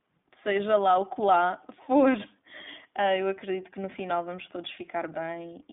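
From start to finish the speech sounds thin, slightly rough and synthetic, with nothing above about 3.7 kHz and a narrow telephone band of roughly 200 Hz to 3.6 kHz. This is iLBC codec damage, each 20 ms frame coded independently, which fits the 15.2 kbps mode.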